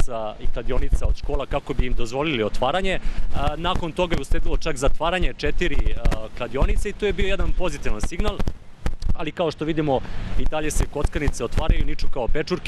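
No technical faults are audible.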